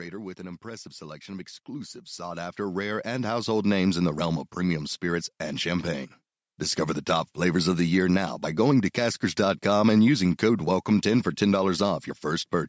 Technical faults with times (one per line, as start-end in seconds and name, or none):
0.36-5.98 automatic gain rising